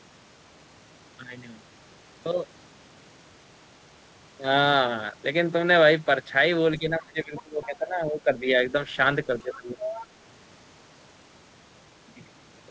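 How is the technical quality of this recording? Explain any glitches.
The recording shows two echo-control problems in the middle of the speech, heard over a call path whose audio stops at 8 kHz, which fits a wideband codec such as G.722.

Speech suppressed in double talk occurs from 6.79 to 8.48 s and again from 9.27 to 9.83 s. The talker's level sinks by roughly 20 dB in the first stretch and about 15 dB in the second. This is likely the echo canceller mistaking simultaneous talk for loudspeaker echo and attenuating everything at the microphone. The voice dips and thins in pieces rather than holding steady.

The other side's voice leaking through appears as short fragments at 7.37 to 7.42 s and 7.63 to 7.77 s, faint and well below the talker. A longer, more obvious stretch follows from 9.83 to 10.06 s at only about 10 dB under the speech. The cause is likely loudspeaker sound reaching the microphone that the echo canceller failed to remove completely, so scraps of a second voice sit under the main one.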